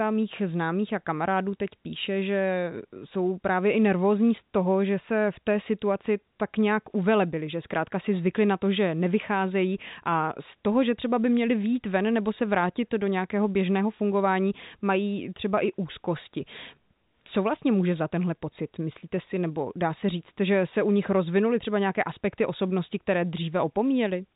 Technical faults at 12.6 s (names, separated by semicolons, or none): none